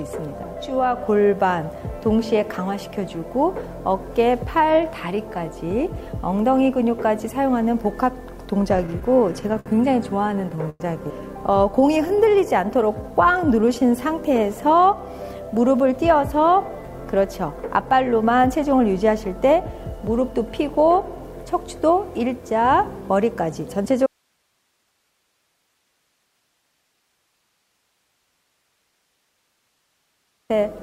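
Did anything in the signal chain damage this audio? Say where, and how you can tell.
Yes. At the network stage, late packets repeatedly emptied the jitter buffer, causing repeated stalls (stutter) from 8.77 to 9.68 s and from 10.28 to 10.82 s. The receiver stretched the last sound through each gap, the longest about 0.1 s, so the audio drags and catches.

Next, the jitter buffer slowed playback to rebuild its reserve. From 11.81 to 14.05 s it repeated pitch periods, adding 0.2 s and running at 91% speed. The sound is drawn out at unchanged pitch.

The opposite correction follows. With too much audio queued, the jitter buffer sped up from 15.84 to 20.29 s, trimming roughly 0.3 s in small pitch-period cuts. Playback runs at 107% speed without a pitch rise, so it sounds hurried.

Finally, an audio dropout to a faint residue begins abruptly at 24.06 s and lasts about 6.4 s, to 30.50 s. Only hiss remains, far below the signal level, which likely points to a broken connection upstream while the path after the break stayed live.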